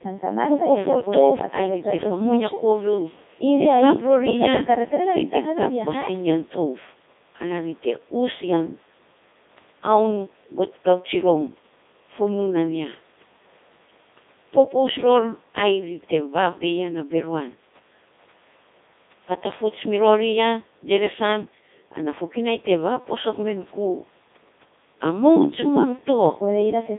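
Throughout, the speech has passed through a Codec 2 vocoder, which keeps only pitch, voicing, energy and spectral shape and rebuilds the voice from sine waves. The result is heavily robotic and buzzy, confined to roughly 200 Hz to 3.7 kHz, consistent with the 3.2 kbit/s mode.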